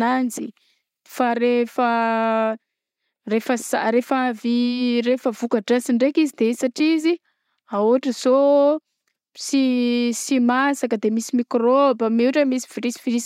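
From 1.47 s onward, channel delay (comb filtering): one channel lags by roughly a sample, so the mono sum notches near 20 kHz, dulling the top like gentle filtering rather than audibly hollowing the speech.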